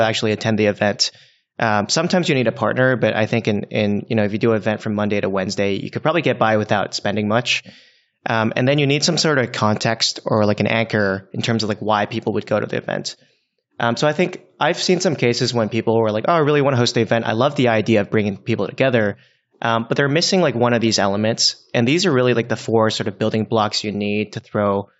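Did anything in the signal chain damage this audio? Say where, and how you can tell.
No, nothing in the chain damaged this speech; the only trace is the call microphone processing, which removes the lowest bass, and that is normal behaviour for that stage.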